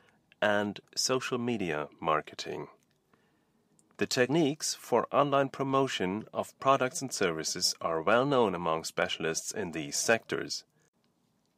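No technical faults occur anywhere in the recording.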